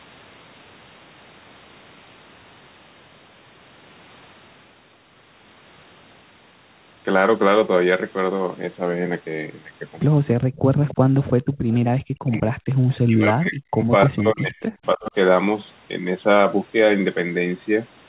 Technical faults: background gated by the echo canceller; echo leak; speech suppressed in double talk

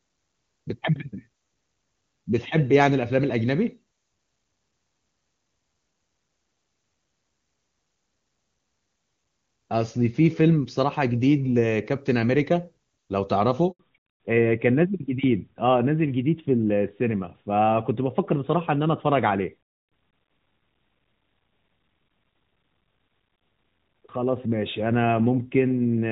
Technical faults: handover gap; fallback to narrowband

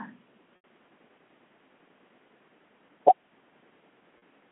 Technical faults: packet loss with pitch repetition

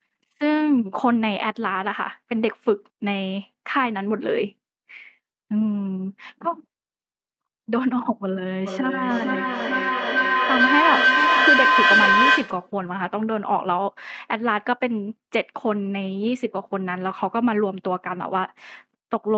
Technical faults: feedback howl

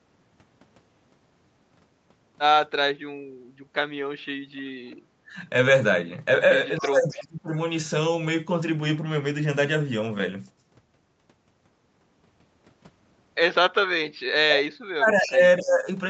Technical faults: speech suppressed in double talk; echo leak

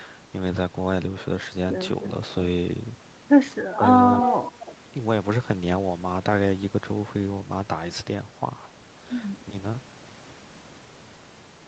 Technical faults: speech suppressed in double talk

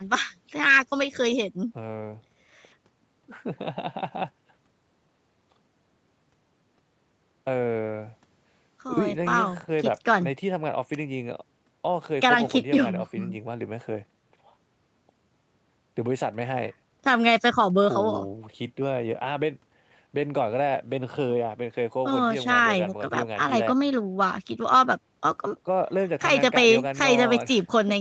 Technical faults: none

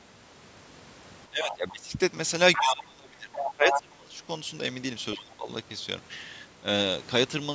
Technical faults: speech suppressed in double talk; other side's voice leaking through

